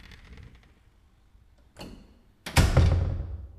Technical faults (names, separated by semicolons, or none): time-stretched section